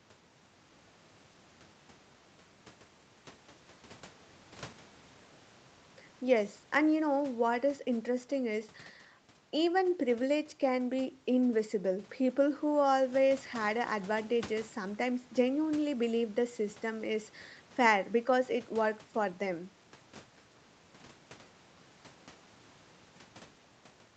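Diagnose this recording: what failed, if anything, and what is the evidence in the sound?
Nothing failed in this recording, and the sound gives no evidence of any fault.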